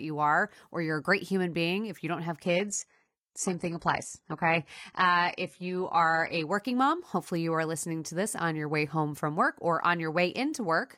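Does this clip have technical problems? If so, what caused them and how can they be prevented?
Yes. From 2.44 s to 6.44 s the speech switches abruptly to an adaptive stream at a lower bitrate, with no gap. Nothing remains above 11.8 kHz, and codec artefacts rise. This fits a fall from a 96 kbit/s AAC rendition to a 16 kbit/s HE-AAC one after the connection slowed, with spectral band replication rebuilding the top end. Better buffering, or a higher minimum rendition in the bitrate ladder, would prevent this.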